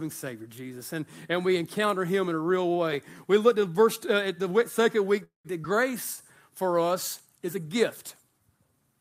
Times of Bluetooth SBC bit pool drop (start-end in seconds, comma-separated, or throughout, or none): none